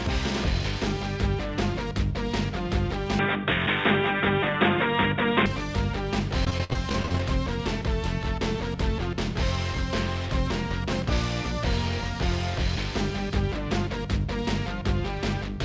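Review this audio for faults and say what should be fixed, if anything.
Input switched to a poorer device, 3.19 to 5.46 s: the sound abruptly turns dull and boxy, with nothing above 3.8 kHz. The level shifts by about 5 dB, and a new noise floor appears roughly 40 dB down, with no gap at the changeover. This is likely the capture moving to a narrower-band microphone or headset call profile, then back. Lock the input device and disable automatic device or profile switching during recording.

Repeated packet loss (robotic sound), 6.45 to 7.20 s: about a dozen holes in quick succession, the longest 52 ms, give a choppy texture. Each gap is patched by extending the preceding sound, so about 27% of this stretch is synthetic fill. Use a wired or more stable connection, and allow a larger jitter buffer or forward error correction.

Train of clicks, 8.25 to 11.97 s: about thirty near-identical ticks arrive at a steady 8.62 per second, peaking about 5 dB above the sound. 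They are audible throughout, including in pauses. Their regular pace points to a likely cause in electrical interference or a faulty connection or power supply. Move or shield the cabling from nearby equipment and check the interface and its driver.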